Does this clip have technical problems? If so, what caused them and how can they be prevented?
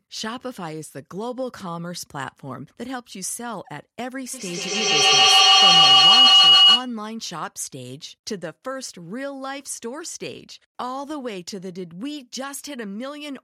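Yes. A feedback howl runs from 4.34 to 6.95 s. Two devices in one room looped loudspeaker into microphone with rising gain, building a tone near 3 kHz that pulses roughly every 150 ms and peaks about 17 dB above the speech. Muting one device or using headphones prevents it.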